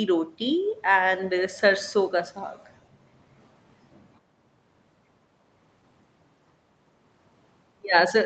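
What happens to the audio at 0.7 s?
Nothing goes wrong at 0.7 s: the speech there is intact, carried cleanly through the call path with its normal band limit at about 8 kHz.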